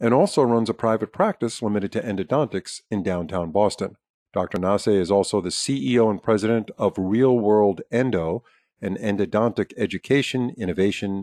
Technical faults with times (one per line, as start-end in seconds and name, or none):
none